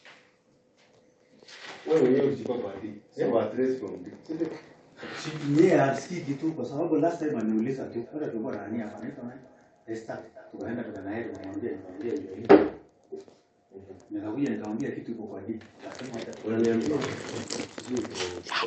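From 7.83 to 12.72 s there is feedback echo between two devices: a second device in the same room on this call was playing back what the other device's microphone sent, and that microphone picked the sound up again and fed it back into the call. Each echo canceller only subtracts what its own device plays, so nothing removed it. The speech returns at a steady interval of roughly 0.3 s, thinner and more ringing, peaking at about 22 dB below the speech.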